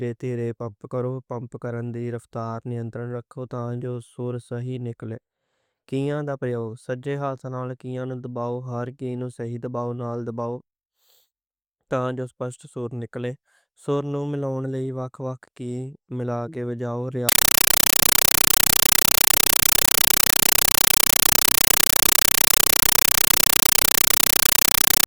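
From 17.29 s to 25.06 s the speech is replaced by a compressed stream played as audio. The link passes a Dolby Digital (AC-3) bitstream through undecoded, treating it as samples. Each frame becomes an 8 ms noise burst plus silence, 31.25 times a second, heard as harsh, chattering static.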